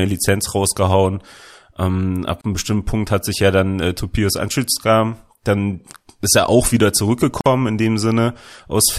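At 2.41 s and again at 7.41 s the speech drops into a gap at a join of encoded pieces, gaps of 32 ms and 50 ms. Unremoved encoder delay and padding cause it. Speech resumes unchanged.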